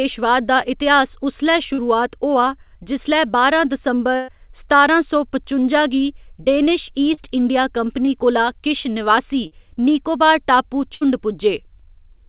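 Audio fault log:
1.74–1.80 s, 7.14–7.19 s, 8.05–8.09 s, 9.47–9.53 s: short concealed packet loss. Packets holding 20 to 40 ms of audio reached the decoder too late. The receiver extended the preceding sound from its pitch, or as shaped noise, and then blended back, leaving brief smears or wobbles in the 4 kHz-limited call audio.
4.16–4.30 s and 10.95–11.03 s: burst of packet loss. Consecutive packets went missing, costing about 120 ms and then 60 ms of audio. The receiver bridged each gap by continuing the last sound and fading it, heard as a held buzz or dying hiss, with no silence in the first. The audio then resumes further on, with that stretch gone.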